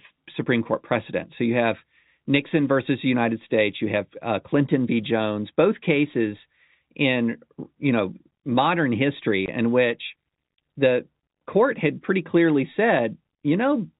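It's a speech clip carried over a G.711 mu-law telephone path, so it's band-limited to below 4 kHz, with only the faint level-tracking quantisation hiss that coding brings. The audible fault is packet loss filled with silence at 9.46 to 9.48 s, right after "you know modern history" and before "in which the court". The gap lasts 20 ms, which fits one lost packet, and the receiver just dropped in silence. The hole has hard edges either side.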